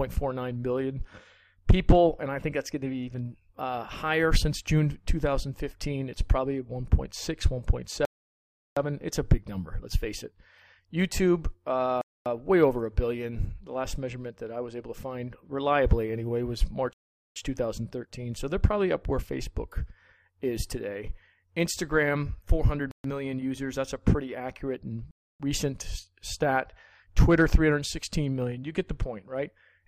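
The audio drops out five times, each a clean cut to silence before the sound carries on. The gaps fall at 8.05 to 8.77 s (0.71 s), 12.01 to 12.26 s (0.25 s), 16.93 to 17.36 s (0.43 s), 22.91 to 23.04 s (0.13 s) and 25.11 to 25.40 s (0.29 s). These are likely Bluetooth stalls. Radio interference delays packets. The receiving buffer empties. Playback halts until the resent data arrives.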